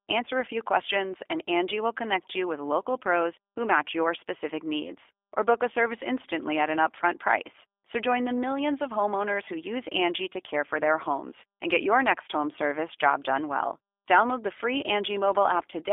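Speech heard through a G.729 codec throughout. The band stops near 300 Hz and 3.5 kHz. The rough, synthetic rebuild fits an 8 kbit/s stream.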